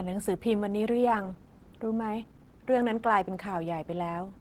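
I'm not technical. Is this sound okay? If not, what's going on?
No. Opus voice compression runs through the whole recording, from start to finish. The lower part of the speech is rebuilt by a model of the voice that copies its basic shape but only roughly fills in the fine detail underneath. The upper part is handled by a second layer. Treble is kept, so it doesn't sound muffled, but the squeezing is plainly audible, giving the speech a coarse, slightly artificial, processed quality.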